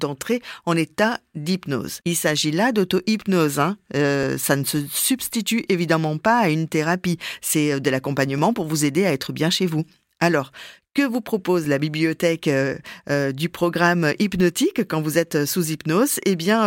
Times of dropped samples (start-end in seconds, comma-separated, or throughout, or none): 4.23, 11.65